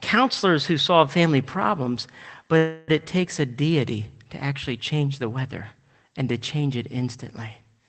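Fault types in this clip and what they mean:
Call audio freeze: at 2.57–2.90 s the sound stretches into a fading buzz, likely delayed packets draining the jitter buffer; speech resumes with nothing lost.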